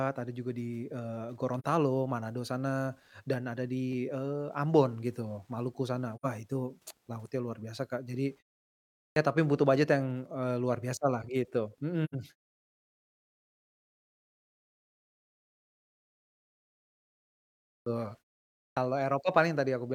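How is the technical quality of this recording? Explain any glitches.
The recording has two recurring faults: three brief dropouts and three speech onsets that lose their beginnings.

AAC frame loss with muting occurs at 1.59 s, 6.15 s and 12.04 s. The decoder received no data for those frames and output silence in their place, so the speech fades out and back in over about 43 ms at the first point and about 85 ms at the other two. The result is a brief dip at the first point and soft-edged holes at the other two, consistent with one and then two missing frames.

A clipped start after a pause occurs at 9.11 s, 17.81 s and 18.71 s. The output device went idle during the preceding silences (about 0.77 s, 5.5 s and 0.56 s) and needed time to wake again. About 52 to 56 ms of sound at each onset is lost, so speech such as "tapi butuh" begins abruptly without its first sounds.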